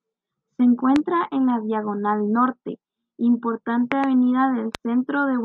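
Loud pops occur at 0.96–0.98 s, 3.92–4.06 s (a close pair) and 4.75–4.77 s, each peaking well above the speech, which continues underneath. They are likely sudden voltage pulses, such as from static or a switching glitch, shaped into sharp thumps by the downstream circuitry.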